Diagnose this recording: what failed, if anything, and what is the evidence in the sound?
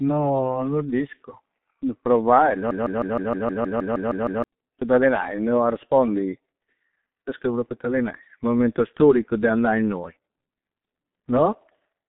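The speech sounds muffled and hoarse throughout, with consonants smeared. Nothing reaches above about 3.8 kHz, and the usable band sits roughly between 150 Hz and 3.6 kHz. This is heavy G.723.1 codec damage at the codec stage. Its 30 ms frames and slowly updated voice model cannot follow fast articulation, and the coarse, grainy texture fits a bitrate near 6.3 kbit/s. That low rate leaves almost nothing to describe consonant detail.

From 2.71 s to 4.44 s, a fragment of about 156 ms repeats back to back, around eleven times, like a broken-record loop. The speech that belonged in that stretch never plays. The likely cause is a stall in the player, encoder or stream buffer, which kept re-sending the last fragment it held until fresh data arrived and normal playback resumed at 4.44 s.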